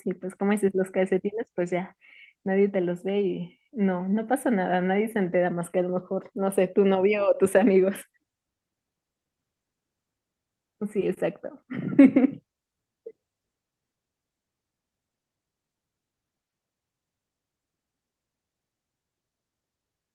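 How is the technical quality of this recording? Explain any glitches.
The technical quality of the recording holds up, with no glitches to explain.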